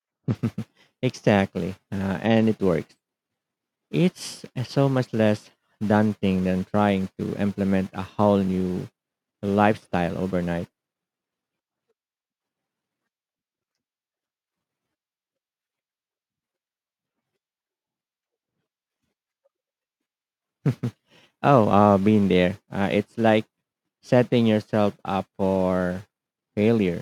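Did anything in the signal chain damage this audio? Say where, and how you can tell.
No, nothing in the signal chain damaged this audio.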